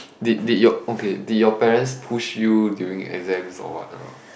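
Speech, with no technical faults heard anywhere in the recording.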